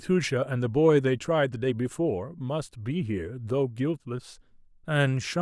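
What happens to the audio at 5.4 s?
At 5.4 s the speech runs on intact, with no dropout, click or distortion at that moment.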